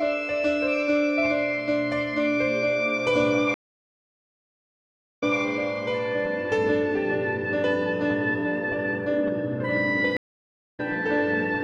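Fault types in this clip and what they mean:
stream reconnect: the connection broke, the music went silent, and a fresh decoder picked the stream up again at a different point. At 3.54 s the music stops for 1.66 s and comes back 183 ms earlier, so a short stretch repeats. At 10.17 s a 0.6 s gap is followed by a jump of roughly 0.4 s ahead. A plain dropout would resume exactly where the sound left off, but here the timeline itself shifts across each gap.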